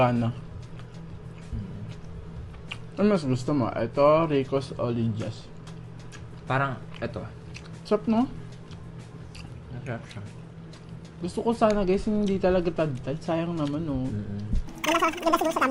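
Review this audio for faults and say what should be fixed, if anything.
A wrong sample rate affects the final stretch, from 14.68 s to the end at 15.71 s. Samples are being clocked out at twice the rate they were captured at, with no conversion between the two. The audio therefore runs at double speed and jumps up 12 semitones, a full octave, sounding squeezed and hurried. The exact 2:1 ratio fits 24 kHz material played through a 48 kHz path. To prevent it, resample whenever the source and output rates differ, and verify the rate at every handoff.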